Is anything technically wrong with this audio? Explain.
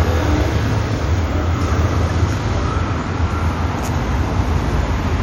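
Yes. There is one brief disturbance, from 2.08 to 2.11 s. For about 30 ms the sound breaks up and skips forward, lasting roughly one 26.1 ms frame. The likely cause is a broken MP3 bit reservoir. Frames borrow spare bytes from earlier frames, so when frames are dropped, the frame after the gap decodes against the wrong data. The result is a short garbled stretch before clean decoding resumes.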